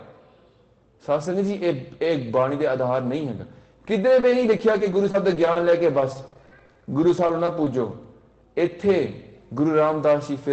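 From 4.20 to 8.04 s, packets kept going missing or arriving too late, producing repeated packet loss (robotic sound). Around two dozen short holes, the longest about 50 ms, were each papered over by extending the preceding sound, adding up to roughly half a second of rebuilt audio, about 13% of that stretch. The result is a choppy, robotic texture with fragments dropped, heard against the call path's top end, which stops near 8 kHz.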